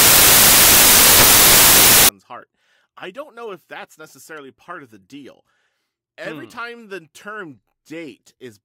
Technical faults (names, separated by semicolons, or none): samples built from the wrong bytes